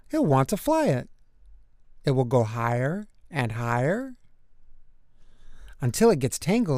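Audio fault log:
Nothing here needs fixing; no faults turned up anywhere in this one.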